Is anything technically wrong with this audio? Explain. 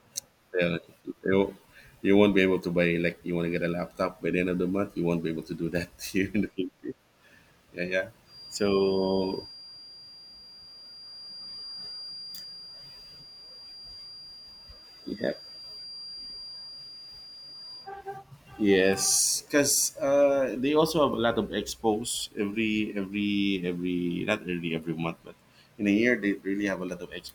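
Yes. From 8.23 to 17.92 s a thin, steady whistle at 4.8 kHz sits well below the speech, swelling and fading slowly in level. This feedback whistle likely comes from a loudspeaker-to-microphone loop held just at the edge of feedback, sustaining one tone without building.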